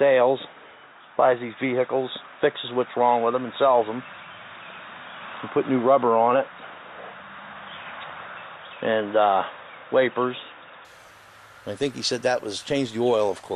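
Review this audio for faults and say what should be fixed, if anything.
Input switched to a poorer device, 0.0 to 10.85 s: dull sound, nothing above 3.8 kHz, noise about 40 dB down, likely a narrow-band input, clearing at 10.85 s.

Lock the recording to the intended microphone and disable automatic device or headset-profile switching.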